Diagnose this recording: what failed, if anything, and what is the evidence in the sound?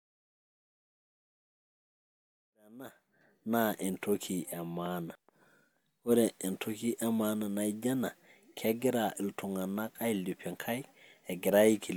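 Nothing failed in this recording.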